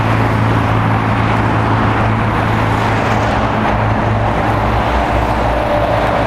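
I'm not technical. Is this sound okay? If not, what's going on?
No. The likely cause is clock drift buffer slips: two connected devices keep slightly different time, so every 1.57 seconds a few samples get dropped or repeated. You hear this as a regular click, about four times between 1.37 and 6.07 seconds.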